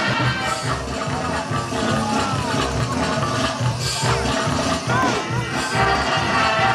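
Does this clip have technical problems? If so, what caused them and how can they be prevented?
No, the signal holds steady throughout, with no technical faults to trace or prevent.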